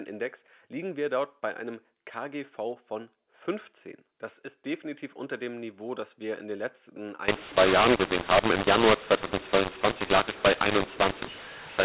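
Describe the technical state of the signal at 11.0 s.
At 11.0 s the audio is inside a mu-law and A-law mix-up running from 7.28 s to the end. A-law telephone samples are decoded as mu-law, scrambling levels into harsh distortion and lifting pauses into noise. Unlike clipping, quiet moments are corrupted too, not just peaks.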